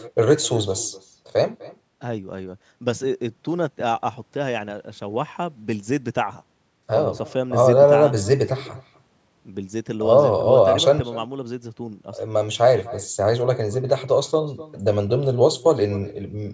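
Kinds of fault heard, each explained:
Echo with no canceller: The far end plays the call through a loudspeaker, and its microphone sends it back unremoved. Throughout this speech, each phrase returns roughly a third of a second later. The copy is about 20 dB quieter and thinner.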